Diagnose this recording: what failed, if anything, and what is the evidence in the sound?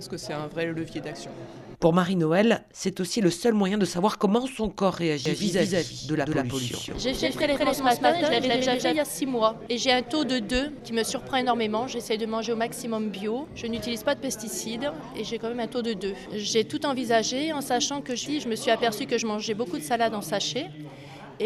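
Between 5.26 and 8.96 s there's a doubled audio track: a second full-band copy of the sound trails the original by around 200 ms, at roughly the same level, so everything seems to slap back on itself. The copy has no decay or room colour and switches in and out abruptly at both ends. That points to a routing or editing problem rather than acoustics, likely the signal captured a second time through a slower path, or two out-of-step copies left overlapping in an edit.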